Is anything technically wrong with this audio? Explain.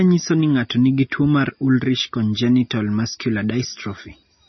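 Yes. Throughout, the speech is band-limited, with nothing above 5.9 kHz, and sounds watery and swirly, likely from heavy MP3 compression at a low bitrate near 24 kbps. The starved encoder cuts the treble and flickers weak frequency lines on and off.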